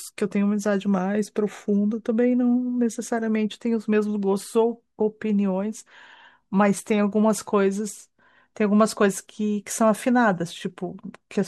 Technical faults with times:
none

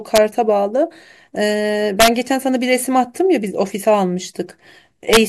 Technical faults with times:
0.16 integer overflow
2.00-2.08 integer overflow
5.13-5.17 integer overflow

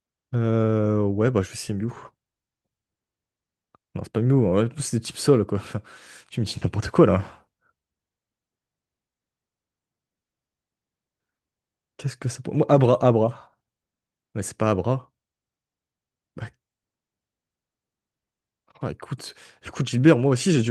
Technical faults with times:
none

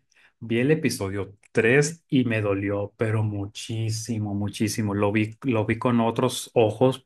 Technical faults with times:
1.00-1.88 drift correction step

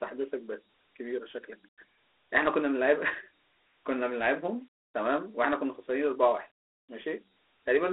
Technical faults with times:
0.00-7.92 Dialogic VOX ADPCM

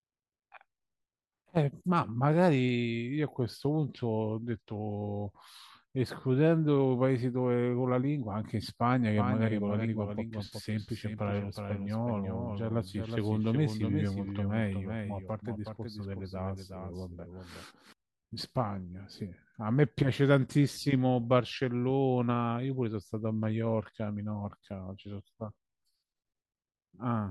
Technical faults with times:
9.17-17.93 doubled audio track

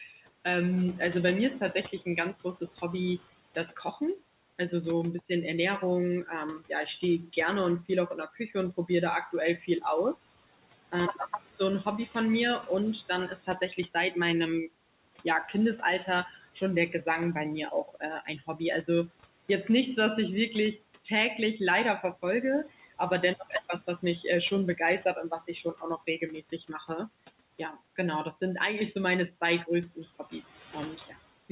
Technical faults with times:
0.00-31.51 noise suppressor artifacts
0.00-31.51 speech cut by the noise suppressor

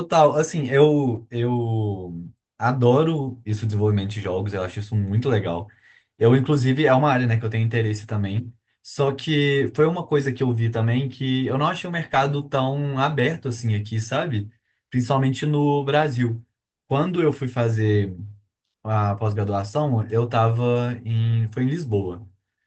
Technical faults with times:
1.15-1.17 lost packet rebuilt from error correction
9.05 lost packet rebuilt from error correction
10.73-10.79 lost packet rebuilt from error correction
12.13 lost packet rebuilt from error correction
20.01 lost packet rebuilt from error correction

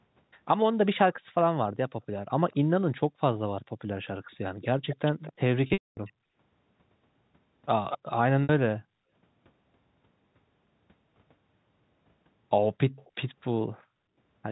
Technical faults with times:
1.18-1.32 background gated by the echo canceller
2.51-6.13 echo leak
3.64-3.79 background gated by the echo canceller
5.67-5.97 packet loss with pitch repetition
6.25-6.36 background gated by the echo canceller
7.90-7.98 echo leak
8.43-8.49 packet loss with pitch repetition
8.79-9.10 background gated by the echo canceller
12.96-13.11 echo leak
13.80-13.98 background gated by the echo canceller

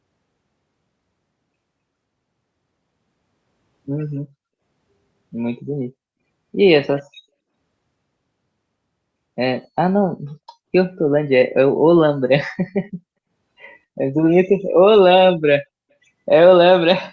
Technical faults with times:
9.63-9.67 echo leak

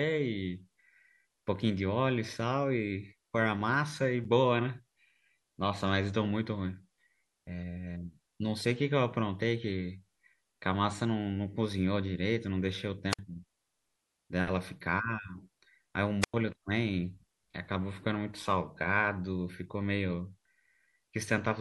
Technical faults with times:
4.24 block of digital silence
13.10-13.19 wireless microphone squelch dropout
16.21-16.34 wireless microphone squelch dropout

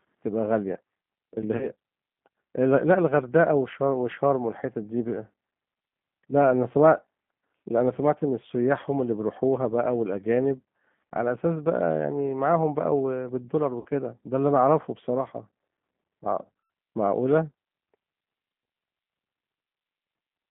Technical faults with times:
0.00-20.50 G.729 codec
1.57-1.68 VoIP packet loss concealed by the speech codec
13.81-13.87 VoIP packet loss concealed by the speech codec
16.62-16.70 VoIP packet loss concealed by the speech codec

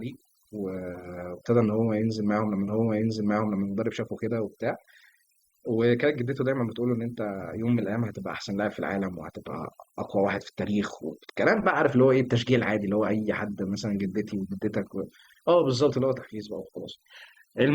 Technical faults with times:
0.00-17.75 overdone noise removal
2.67-3.67 stream segment repeated

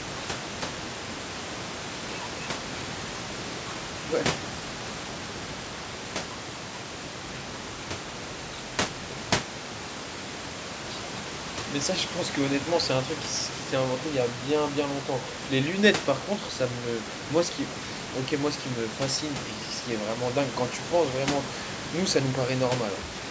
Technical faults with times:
0.00-23.30 low bit depth without dither

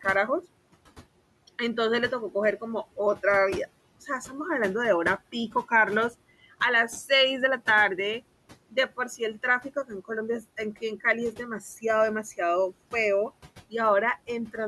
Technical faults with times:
0.00-14.68 noise suppressor artifacts

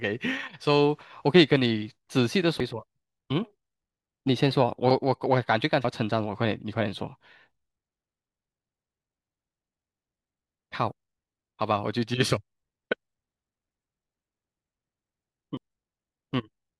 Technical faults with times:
2.52-2.60 compressed frames skipped
4.91 compressed frames skipped
5.84 compressed frames skipped
15.57 compressed frames skipped

